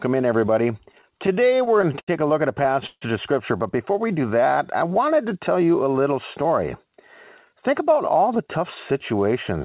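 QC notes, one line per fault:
0.86–2.09 s and 2.63–3.03 s, repeated stalls (stutter): after "in everybody" the jitter buffer ran dry 15 times before "a look at", then 4 times. The receiver stretched the last sound over the gaps, with the longest gaps at 81 ms and 150 ms. It drags and stutters, but nothing is skipped.
6.05–6.98 s and 7.53–9.13 s, jitter buffer speed-up: after "to tell you a", the receiver trimmed pitch-period slices, around 70 ms in each span, to cut its backlog. The speech runs at 106% and then 104% speed with the pitch unchanged, so the first span sounds hurried rather than higher.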